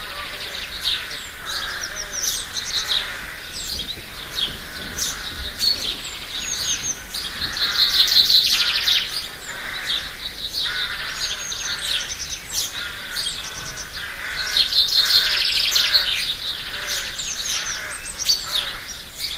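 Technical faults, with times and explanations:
No technical faults.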